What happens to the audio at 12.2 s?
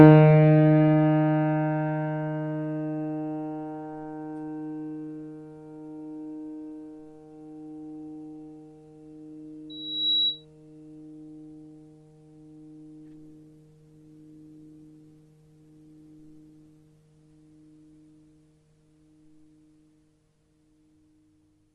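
Nothing goes wrong at 12.2 s; the sounds carry straight through that moment with no dropout, click, distortion or other fault.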